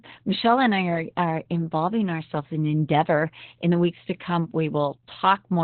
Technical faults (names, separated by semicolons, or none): Opus voice compression